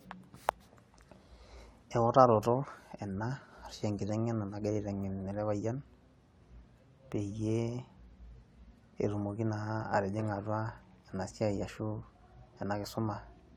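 Nothing stood out on listening to this speech recording.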